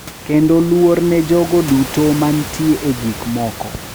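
No technical faults are audible.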